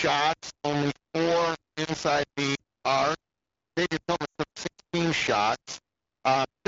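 From start to finish the speech is coated in a harsh, grainy distortion that rises and falls with the sound itself. Quiet passages sputter or drop out entirely rather than fading smoothly. This is likely low bit depth without dither, rounded to roughly 3 bits, which leaves the error nearly as loud as the speech. On a waveform the trace forms a few coarse stair-steps. A spectrogram shows broadband hash tracking every syllable instead of a steady noise floor.

At 2.55 s, just after "only four inside", lost AMR speech frames cause a brief dip lasting 40 ms, which fits two 20 ms frames. The decoder repeats the last good pitch and vocal-tract settings at falling gain. A longer gap follows from 4.25 to 4.36 s, about 100 ms. There the sound drops to near silence within two frames before the speech returns weakly. On a spectrogram the harmonics freeze into flat horizontal bands that dim, while the waveform shrinks to a fading repeated cycle. 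The AMR wideband (HD Voice) codec at 12.65 kbit/s carries the band up to about 7 kHz around these events.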